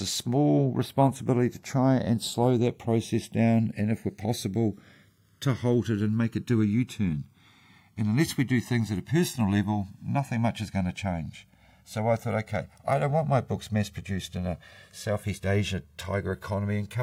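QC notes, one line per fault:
Throughout: channels drifting apart. The delay between left and right slides steadily over the length of the speech, reaching roughly 2 ms by the end, which points to the two channels being captured on separate clocks that disagree by something like 100 ppm. Summed to mono, the shifting offset moves the comb-filter notches slowly through the spectrum, so the speech picks up a gradual, sweeping flanging colour that changes across the clip.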